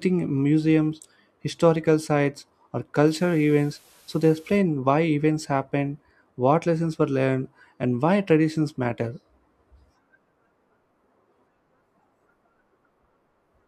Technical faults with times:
3.07-4.57 low bit depth with dither

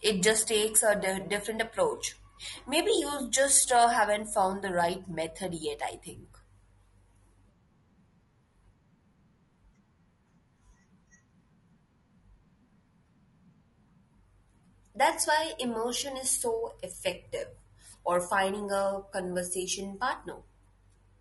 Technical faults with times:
0.00-21.21 low-delay AAC compression

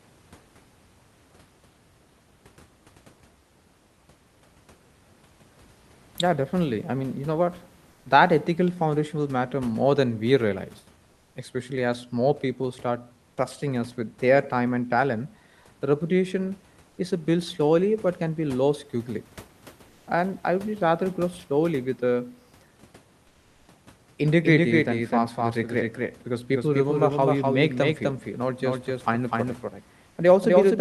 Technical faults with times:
7.91-8.05 comfort noise in place of the background
11.11-11.35 comfort noise in place of the background
16.89-16.97 comfort noise in place of the background
23.27-23.67 comfort noise in place of the background
24.44-30.80 doubled audio track

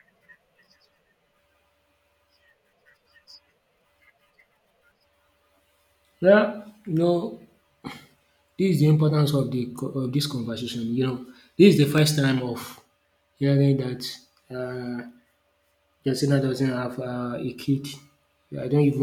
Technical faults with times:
11.98-17.99 periodic USB or driver dropouts

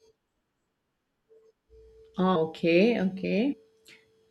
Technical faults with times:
2.35 compressed frames skipped
3.52-3.54 compressed frames skipped

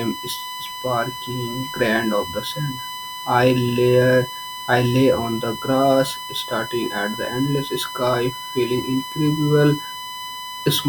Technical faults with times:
0.00-10.89 USB whine

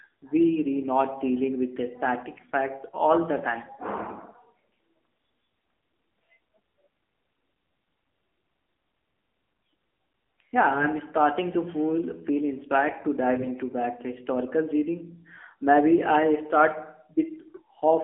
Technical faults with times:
0.00-18.04 AMR narrowband mobile codec
10.76-10.87 AMR bit errors
13.36-13.50 AMR bit errors

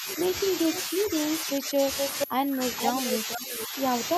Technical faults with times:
0.00-4.18 switching supply whistle
0.00-0.32 speech suppressed in double talk
0.69-1.86 speech suppressed in double talk
0.73-0.81 echo leak
1.97-2.27 echo leak
2.25-3.82 speech suppressed in double talk
2.79-3.64 echo leak

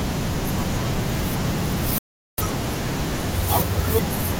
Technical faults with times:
1.98-2.38 rebuffering stall

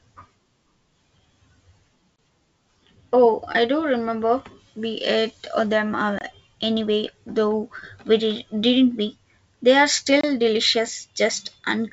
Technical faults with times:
2.16-2.18 gap between chunks
6.18-6.21 gap between chunks
10.21-10.23 gap between chunks

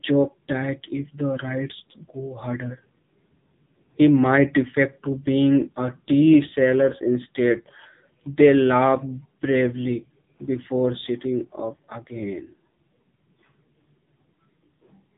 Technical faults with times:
0.00-15.17 AMR narrowband mobile codec

